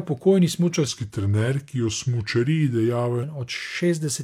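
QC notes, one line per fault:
0.88–3.23 s, section at the wrong speed: the speech abruptly drops to about 0.85 times its normal rate and sits roughly three semitones lower, sounding slower and deeper until it snaps back at 3.23 s. Speed and pitch shift together, which likely means this stretch was played against the wrong clock. On a spectrogram, harmonics and formants step down at the start and back up at the end, and spread apart in time between. On the waveform, syllables look stretched.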